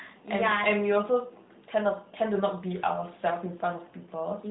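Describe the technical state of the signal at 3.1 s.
At 3.1 s the speech is intact, with no fault present, only the ordinary narrowband character of the AMR mobile codec, which passes nothing above about 3.8 kHz.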